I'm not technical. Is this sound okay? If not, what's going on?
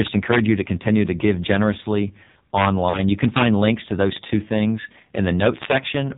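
No, not quite. The whole clip has been through the AMR narrowband mobile codec, the squeeze that older 2G and 3G phone calls use. Here it's squeezed hard, so the speech sounds buzzy, thin and a bit robotic throughout. The codec keeps only the lower part of the voice, so the crisp top end is gone. It also rebuilds the voice from a rough model instead of the real sound, which is why it comes across as synthetic.

There's also a moment of lost AMR speech frames from about 2.90 to 3.00 s. A short stretch of the call didn't arrive intact, which fits a couple of missing chunks. The phone papered over the gap by repeating the last good bit of voice and fading it down. So for about a tenth of a second the speech smears or wobbles and dips, then comes back a little rough.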